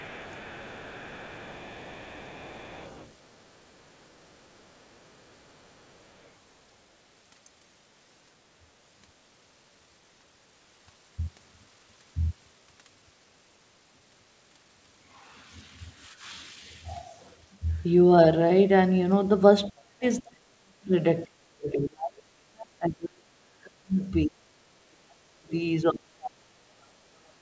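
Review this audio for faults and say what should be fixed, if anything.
The other side's voice leaking through shows up faintly from the start to 3.24 s, roughly 25 dB under the talker, then even fainter, around 40 dB down, from 3.76 to 6.31 s. Short scraps follow at 19.65–19.7 s and 24.01–24.1 s. It's likely residual echo: the loudspeaker's output reached the mic and the echo canceller didn't fully subtract it. To prevent it, improve the echo canceller's adaptation or add a stronger residual-echo suppressor.

Speech suppressed in double talk hits from 19.7 to 20.92 s, from 21.25 to 25.53 s, and from 25.9 s to the end. The talker's level dips by as much as about 40 dB, so stretches nearly vanish. The likely cause is that both sides were talking at once and the canceller, unable to separate near speech from echo, ducked everything. The leak at 24.01 s even sneaks through inside one of those dips. 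To prevent it, use better double-talk detection so suppression backs off when the local talker is active.

The band tops out at 8 kHz, which fits a wideband call codec like G.722.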